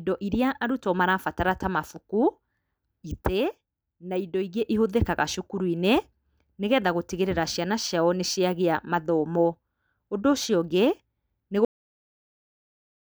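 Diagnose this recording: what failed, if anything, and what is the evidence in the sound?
Cut-off end at the storage stage: the speech stops mid-sound at 11.65 s, the final buffers never written, leaving flat digital silence, a sheer waveform edge without decay.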